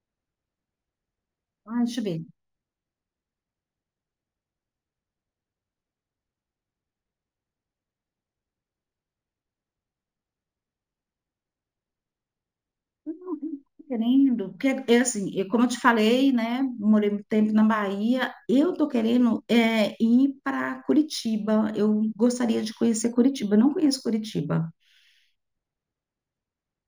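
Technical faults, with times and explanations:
Throughout, imaging from linear upsampling: sibilants carry a faint metallic shimmer, and the top of the speech band sounds dulled. A weak mirror copy of the spectrum sits between 8 kHz and 16 kHz, roughly 30 dB below the speech. This fits a 16 kHz recording raised to 44.1 kHz by drawing straight lines between samples. That interpolation filters poorly, so it softens the highest genuine content and leaves those fainter reflected images above it.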